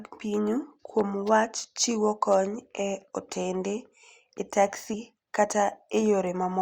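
At 4.93 to 4.96 s the speech jumps forward: compressed frames were skipped, either missing from the stream or rejected by the decoder as corrupt. Roughly 70 ms of audio never plays, which fits about three 20 ms frames. A waveform shows an abrupt change in envelope with no gap, and a spectrogram shows harmonics and formants shifting discontinuously at that point.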